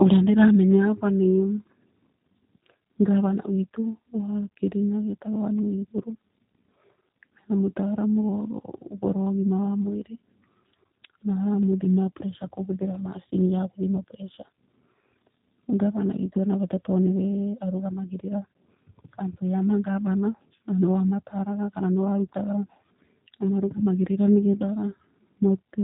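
Throughout, the speech sounds rough, slightly synthetic and dull, with nothing above 3.8 kHz: G.729 codec damage, which fits an 8 kbit/s stream rebuilt from pulses.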